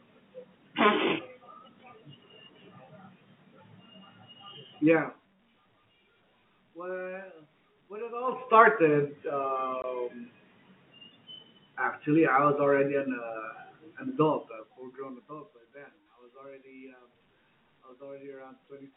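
From 4.84 to 5.32 s the level falls by about 20 dB, and from 8.16 to 8.52 s, just after "when it", it climbs back by about 20 dB. Both moves show zipper noise: the gain changes in 2 dB jumps, around thirty a second, with no smoothing between them. Each jump puts a small discontinuity in the waveform, so a fine ticking or zipping rides on the sound while the level moves. A proper fader move glides silently, and these steps are spaced too regularly and too closely to be mistaken for isolated clicks.

At 9.82 to 9.84 s a 20 ms hole opens in the telephone-band speech. This is packet loss filled with silence: one lost packet of that length was replaced by nothing, leaving an abrupt cut-out and restart with hard edges. The gap is a single clean drop to silence, which sets it apart from the rapid ticks of the zipper noise.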